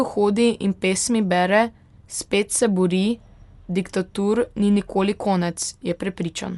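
Throughout, the speech sounds dull, with a plainly audible rough, fluttering noise around tones. This is likely Dolby Digital compression at a low bitrate, around 64 kbps. A spectrogram shows nothing above 11.4 kHz and speckled noise where bit-starved frequency lines were filled in.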